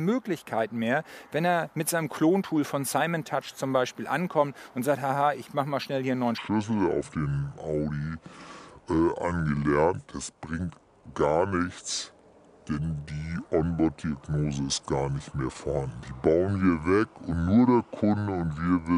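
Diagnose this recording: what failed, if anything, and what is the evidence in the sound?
From 6.38 s to the end, a section at the wrong speed plays at 0.652 times normal rate, dropping about seven semitones and sounding slow and deep. Likely a playback or editing clock mismatch. On a spectrogram, harmonics shift downward and features stretch horizontally.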